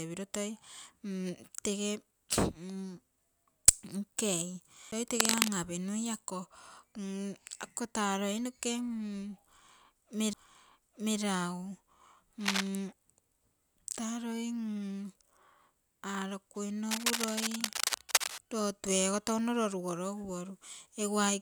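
At 4.91 s a knock or a flaw makes the laser jump off its track and land on a different turn of the disc's spiral, a CD skip. Playback drops out for a very brief moment, roughly a hundredth of a second, and the speech resumes from another point, so a small tick is followed by an abrupt jump in the flow. A second CD skip at 10.33 s repeats this with an even shorter mute of only a few milliseconds.

Starting at 5.20 s and lasting to 5.54 s, a rapidly changing contact resistance, most likely from a worn cable, connector or control being moved, injects irregular bursts of noise. This cable scratch noise is a scratching rustle sitting a little above the speech. It returns from 12.40 to 12.68 s and again for a longer stretch from 16.91 to 18.40 s, both times at roughly the same loudness as the speech.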